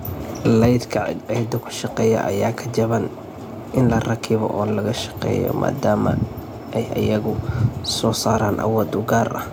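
No technical faults are audible anywhere in the speech.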